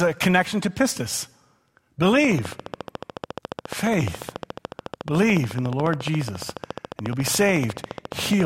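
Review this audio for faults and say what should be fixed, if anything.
A train of clicks runs from 2.25 s to 8.41 s, regular at 14.1 per second, peaking about 10 dB above the speech, likely from electrical interference. On a spectrogram these show as evenly spaced thin vertical lines. Shielding cables and moving the interface away from nearby equipment should prevent it.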